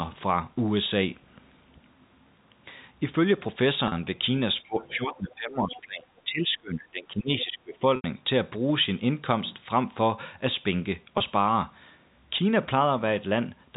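At 0.54 s, a packet loss with pitch repetition occurs: a gap of about 20 ms, the length of one packet, is bridged by repeating the last pitch period. It is heard as a brief, slightly held buzz in the speech. The same happens again at 3.88 s, over about 40 ms.

From 4.62 to 7.85 s, speech is suppressed in double talk, likely because the echo canceller cannot separate the near talker from loudspeaker echo while both sides speak, so it turns the microphone down. Over roughly three seconds the voice dips by as much as about 20 dB.

Within that stretch, at 5.73 to 5.81 s, the other side's voice leaks through, likely from loudspeaker echo the canceller failed to remove. It is a short scrap of a second voice, sitting about 20 dB below the talker.

At 7.96 s the longest packet loss with pitch repetition, about 80 ms, fits several consecutive lost packets. The repeated pitch period fades toward silence before speech cross-fades back in. 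A last one-packet gap of about 20 ms at 11.18 s gives another brief buzz. The fixed-line telephone band of G.711 coding is heard throughout, with nothing above 4 kHz.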